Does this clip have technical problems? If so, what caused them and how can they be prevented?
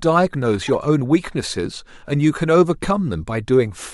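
Yes. Corrupt frame decoded: flipped bits in what sounds like two compressed frames were played anyway, giving a fairly loud glitch of misplaced energy from 0.68 to 0.75 s. Checksums with concealment of damaged frames would prevent it.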